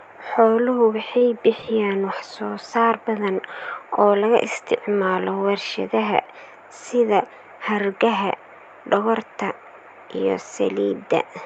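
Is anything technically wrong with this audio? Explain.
Yes. A short stall from a late packet occurs between 1.18 and 1.25 s in this speech. A packet arrived late, the receiver's jitter buffer ran dry, and the decoder stretched the last sound by about 33 ms instead of skipping ahead, so nothing is lost but everything after is delayed by about 33 ms. It sounds like a briefly held, slightly buzzy syllable. On a spectrogram it shows as a smeared, repeated harmonic pattern, and on the waveform as near-identical repeating cycles with a small level dip. The speech passed through an Opus call path, with the spectrum ending around 8 kHz.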